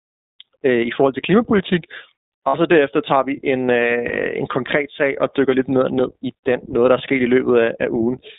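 The whole speech clip runs through the iLBC codec, and you can hear it: the band is squeezed to roughly 200 Hz to 3.7 kHz, and the voice has that plainly audible rough, slightly synthetic edge. That fits iLBC at 15.2 kbps with 20 ms frames.

There are two spots of lost iLBC frames. At 2.48 to 2.55 s, just before "så derefter tager vi", the decoder fills the gap by repeating the last pitch cycle mixed with noise. You get a brief buzzy, held-vowel smear, about 60 ms, which fits three 20 ms frames. At 4.08 to 4.12 s, between "derefter tager vi en" and "en konkret sag og", it happens again, shorter this time, about one 20 ms frame. In both cases the voice snaps back cleanly right afterwards because each frame decodes on its own.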